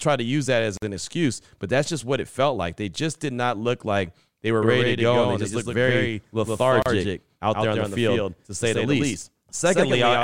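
A gap at a join of encoded pieces opens at 0.77 s, between "to use that as" and "an excuse but that's": about 50 ms of silence with smeared edges, left where separately encoded pieces were butted together untrimmed. From 4.62 s, after "look like they were", a doubled audio track runs to the end. A full-band copy trails by roughly a tenth of a second at about 5 dB lower, with no room colour, likely from a second, slower capture path. A second such join gap, about 34 ms, falls at 6.82 s, six seconds after the first.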